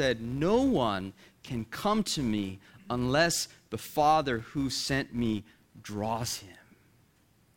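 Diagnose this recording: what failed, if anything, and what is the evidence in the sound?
A filter restarted on every block, in the processing stage, causes a 200 Hz buzz riding on the speech throughout the clip. The buzz rises and falls with the speech level and drops away in pauses, unlike steady mains hum. Each block starts from a reset state and adds a small transient at the block boundary.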